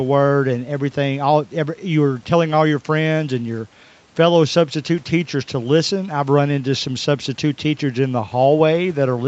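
No faults are audible in the speech; the call path limits it to 8 kHz, and faint room noise sits about 40 dB below it.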